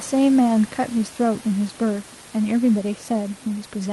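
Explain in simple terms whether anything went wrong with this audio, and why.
Nothing went wrong here: the speech came over an ordinary Opus call link that trims the sound above 12 kHz by design, and the faint room noise far beneath the speech comes from the room, not from the system.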